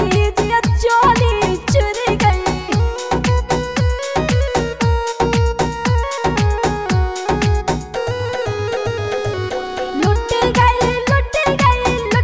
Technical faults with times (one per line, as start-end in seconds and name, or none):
none